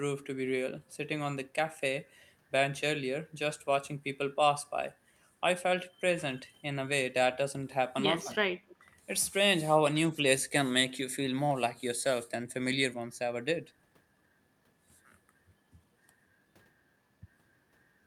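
At the far end, a loudspeaker's output was likely picked up by its microphone and not fully removed by the echo canceller, so a piece of the signal returned down the line as an echo leak. From 8.68 to 8.76 s, a brief, faint copy of the speech follows the original by 176 ms, sitting about 25 dB below it. It is heard as a short ghost rather than a sustained repeat.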